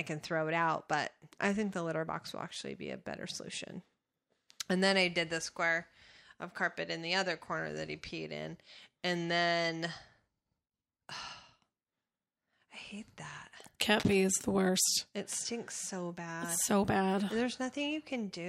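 At 14.00–14.15 s, a burst of cable scratch noise rasps over the speech, roughly 10 dB below it, likely from a worn connector being moved.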